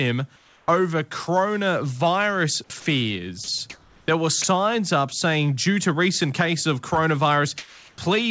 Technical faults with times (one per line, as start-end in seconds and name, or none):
0.36-0.68 comfort noise in place of the background
2.68-2.70 onset clipped by the voice detector
2.80-2.86 sound dropped by the voice detector
3.44-3.60 sound dropped by the voice detector
3.70-4.08 comfort noise in place of the background
4.42-4.44 sound dropped by the voice detector
7.58-7.98 comfort noise in place of the background